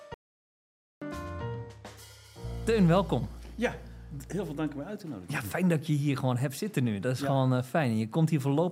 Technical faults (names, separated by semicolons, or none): audio dropout to silence